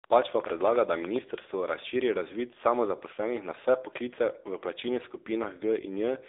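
From the start, the speech goes through the AMR narrowband mobile codec, which fits a low mode near 8 kbps. It sounds buzzy and synthetic, and the spectrogram shows nothing above 3.8 kHz.

From 0.04 to 1.17 s, a train of clicks, about ten at an uneven pace near 9 per second and roughly 10 dB above the speech, shows as thin vertical spikes. Likely cause: interference.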